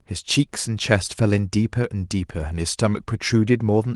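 No technical faults can be heard in the speech. It has passed through a WebRTC call path whose codec coding is audible and whose top end stops at about 12 kHz, which fits Opus at a moderate bitrate.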